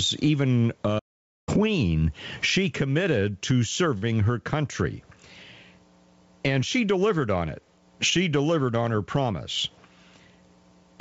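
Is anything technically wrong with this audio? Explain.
Yes. There are four faults in this speech clip.

Gain pumping runs throughout. Loud and soft parts are squashed closer in level, with the gain swinging roughly 25 dB. Excessive gain feeding a fast limiter is the likely cause.

A playback stall occurs from 0.98 to 1.49 s. The speech cuts to silence for about 485 ms, then resumes. The player likely ran out of data.

A short stall from a late packet occurs from 3.98 to 4.04 s. A late packet emptied the jitter buffer, so the last sound was held for 42 ms. Nothing is lost, but it drags slightly.

A jitter buffer speed-up runs from 8.94 to 9.71 s. Speech plays at 106% speed with unchanged pitch, because about 50 ms of short pitch-period pieces were trimmed. It sounds hurried.

The audio also passed through a call path. Nothing is present above 8 kHz, which fits a wideband codec such as G.722.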